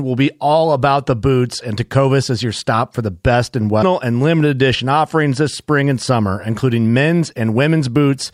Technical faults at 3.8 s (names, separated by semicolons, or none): stream segment skipped